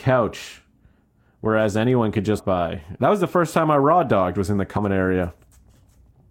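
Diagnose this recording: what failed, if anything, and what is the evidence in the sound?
Codec stage: compressed frames skipped. Audio jumps ahead about 300 ms at 2.38 s, after "whereas anyone could", and about 100 ms at 4.76 s. Roughly 10 frames are lost at the first join and 4 at the second.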